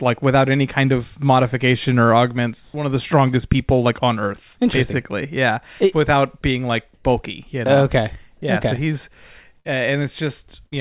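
At 2.64 s, after "kind of modification or", the room background turns flat and featureless for 100 ms, about 2 dB quieter. It returns before "of the strongest people". Comfort noise in place of the background is the likely cause. The sender stopped transmitting during the pause, and the receiver synthesised a smooth stand-in. The same happens at 6.94 s, after "it without being like", for 100 ms, about 1 dB quieter.

At 9.6 s a burst of packet loss occurs. The receiver stretches the last sound for 48 ms, fading it, and 40 ms of audio is lost. At 10.66 s a second burst holds 56 ms of concealment over a 60 ms hole. Both sound like a brief held sound that fades, then a jump ahead. Through the call path, nothing is heard above 4 kHz.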